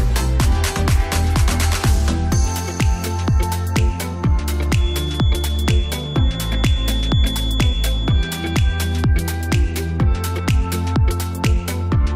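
A feedback whistle runs from 4.71 to 9.09 s: a thin, steady 3.4 kHz tone well below the sound, likely a loudspeaker-microphone loop poised at feedback.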